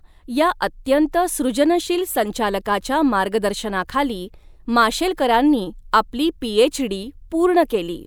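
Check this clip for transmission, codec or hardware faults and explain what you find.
Nothing in the recording points to a transmission, codec or hardware fault. The speech arrives intact, with no dropouts, distortion or glitches to report.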